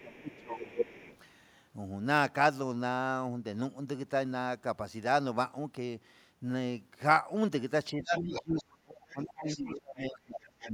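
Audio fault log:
0.00–1.07 s, speech suppressed in double talk. The talker dips, by about 20 dB at worst, for roughly a second in total. Both sides were likely talking at once, so the echo canceller pulled down the talker along with the loudspeaker echo.
0.30–1.17 s, other side's voice leaking through. A second voice sits about 10 dB under the talker. It likely comes from the far end's loudspeaker playback, which the echo canceller failed to fully remove from the microphone signal.
7.93–10.74 s, speech suppressed in double talk. The talker is turned down, by about 30 dB at the deepest point, for roughly 2 seconds in total. The likely cause is again overlapping talk, where the canceller could not separate the talker from the echo.
8.18–8.64 s, 9.10–9.16 s, 9.47–9.73 s, 10.61–10.72 s, other side's voice leaking through. Short scraps of the far voice break through, about 10 to 20 dB below the talker. 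This is likely residual loudspeaker echo that the canceller let past.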